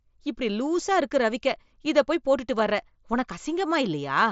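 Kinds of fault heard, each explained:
No faults can be heard in this speech clip. It carries the sound of a wideband Bluetooth headset link using the mSBC codec, with speech reaching up to about 8 kHz and only a light graininess on the louder passages.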